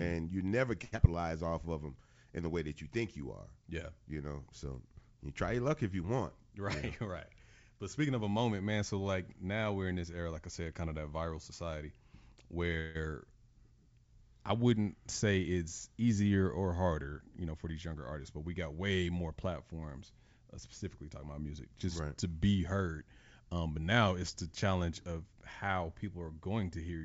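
At 0.84 s the speech hangs for about 0.11 s in a short stall from a late packet. A packet missed its playout time and the jitter buffer ran dry, so the receiver stretched the last sound by 82 ms, with a faint buzz or dip, until the packet turned up. Playback then resumed from the same point, so nothing is lost, but the held sound is audibly too long and the stream now runs 82 ms later.

Straight after, from 0.96 to 1.01 s, there is a skip ahead following "and you never". Roughly 70 ms of audio was discarded while later audio was already queued, and the two sides are butted together with only an 18 ms bridge. The result is a small jump where part of a sound is clipped out. It cancels most of the delay the stall had just added.

From 1.20 to 1.67 s, before "of them in the", a jitter buffer slow-down plays the speech at 89% speed. The receiver rebuilt its reserve by repeating single pitch periods and bits of pauses, adding 61 ms in total. 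Pitch stays put, but the sounds are drawn out, so the delivery seems briefly sluggish.

Three jitter buffer speed-ups follow, where the buffer held more audio than its target and trimmed pitch-period-sized pieces to cut the delay:
6.44–8.21 s at 104%, roughly 70 ms removed.
15.31–16.03 s, between "I wouldn't" and "or harder", at 105%, about 40 ms removed.
17.37–18.37 s at 111%, roughly 100 ms removed, which is the most hurried of the three.
In each, the pitch is unchanged while the pace tightens.

At 12.80 s there is a call audio freeze lasting about 0.18 s. The last sound carries on as a fading buzz or hiss across a 150 ms gap with no true silence, and then speech resumes where it stopped, so nothing is missing but the stream is 150 ms later. The likely cause is packets held up in transit, which emptied the jitter buffer.

Throughout, the audio has nothing above 8 kHz, which fits a G.722 wideband call codec at 64 kbps.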